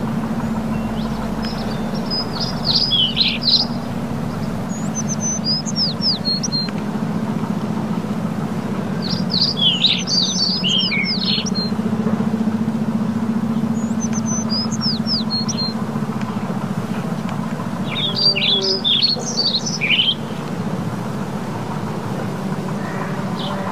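No technical faults can be heard anywhere in the audio, and the signal stays intact and steady from its first moment to its last.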